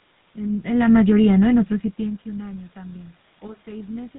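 Throughout, the speech passes through a GSM full-rate codec, consistent with 13 kbps; its pulse-driven model and 4 kHz cutoff leave it plainly buzzy and gravelly.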